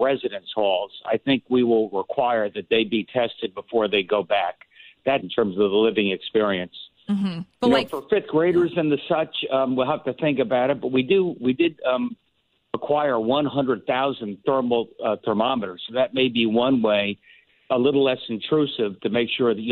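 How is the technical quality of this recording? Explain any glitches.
One glitch stands out. From 5.16 to 5.22 s, the sound jumps forward abruptly, with a brief blip at the join. This is likely a stream segment skipped. One chunk of the stream failed to load, and playback resumed from the next chunk, dropping that stretch.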